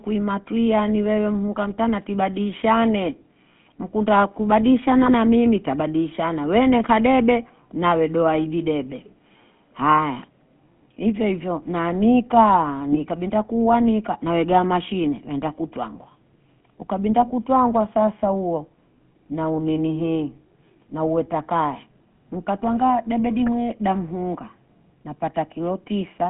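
Speech heard through the GSM full-rate codec for the whole clip. The band is confined to roughly 200 Hz to 3.4 kHz, and the voice carries the plainly audible buzzy, gravelly texture of pulse-excited vocal-tract coding, which fits the 13 kbps full-rate scheme. GSM bit errors break through twice. From 5.03 to 5.11 s, just before "na mimi tabadishana", and from 12.92 to 12.99 s, between "ifyo na nika" and "binta kuwa nika na", corrupted filter, pitch or gain parameters produce short squawks and gargling over a few frames.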